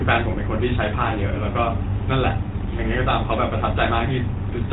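From start to finish, the speech carries GSM full-rate codec damage. The vocal tract is modelled and driven by sparse, regular pulses. That leaves a buzzy, gravelly roughness. Nothing passes above 3.8 kHz, so sibilants sound dull. The rate fits 13 kbps.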